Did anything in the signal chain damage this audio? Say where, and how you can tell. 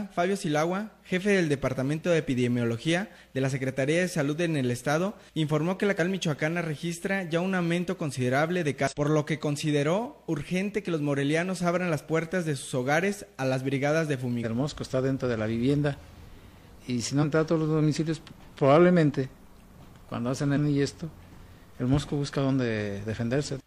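Yes, damaged data in a compressed stream at the codec stage: short glitches at 5.95, 8.87, 14.40 and 17.19 s, where the decoder misreads bad frames and resyncs.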